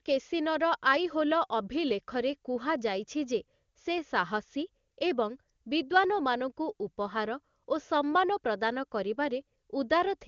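No technical faults can be heard anywhere in this speech recording. It has the sound of an AMR wideband (HD Voice) path at a high rate, likely around 23.85 kbit/s, with the top of the band stopping near 7.2 kHz and the coding leaving at most a faint trace.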